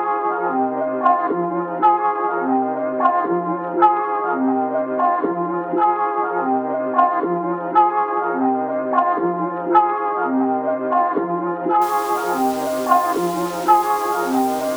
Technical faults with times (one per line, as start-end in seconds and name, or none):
11.82-14.77 low bit depth without dither